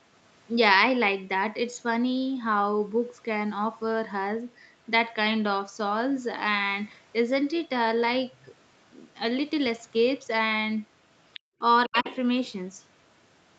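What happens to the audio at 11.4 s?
Between 11.33 and 11.4 s, a brief scrap of the other side's voice leaking through appears, roughly 20 dB below the main speech. It is likely loudspeaker playback that the echo canceller failed to fully remove from the microphone, heard as a faint fragment.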